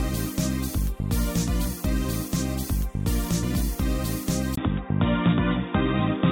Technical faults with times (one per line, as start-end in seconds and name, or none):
4.55-6.31 input switched to a poorer device